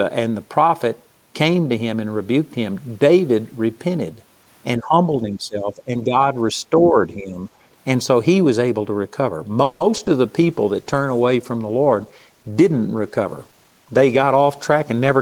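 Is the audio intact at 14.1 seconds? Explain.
No. A call bitrate drop runs from 10.41 s to the end, cutting the encoder from 32 to 15 kbps, so the sound turns coarse, rough and muffled. A jitter buffer speed-up from 13.18 to 14.92 s trims pitch-period slices, about 150 ms in total, so the audio runs about 9% fast at unchanged pitch and sounds hurried.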